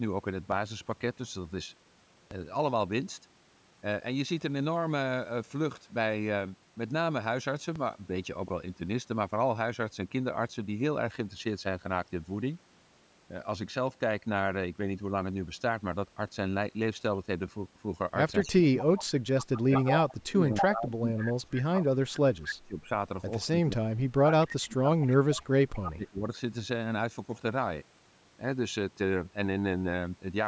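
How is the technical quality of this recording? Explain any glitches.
The recording has a few problems: three early thumps and a rough stretch in the second half where echo and suppression from the call processing get in the way.

DC step at 0.52, 2.31 and 7.76 s: the waveform's zero line suddenly jumps and then drains back as a 20 Hz high-pass pulls it toward centre. Each jump comes through as a low thump or click, while the speech itself carries on untouched.

Echo leak at 18.41–20.66, 21.57–21.85 and 25.34–25.92 s: you hear a copy of the speech trailing 240 ms behind. In the first stretch it's nearly as loud as the speech. Later it's much fainter. This is most likely a loudspeaker echo that the far end's canceller didn't fully remove and sent back down the line.

Speech suppressed in double talk at 18.44–18.85, 19.6–22.89 and 23.68–26.3 s: the talker's level sinks by roughly 25 to 30 dB at its deepest. 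The likely cause is both sides talking at once, so the echo canceller couldn't separate the talker from the echo and ducked both together.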